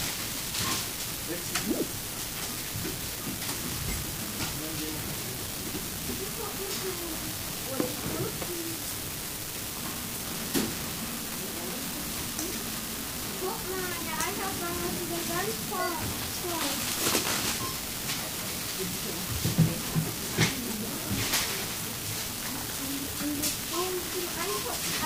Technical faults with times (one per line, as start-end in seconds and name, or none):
0.00-25.06 unreliable data bit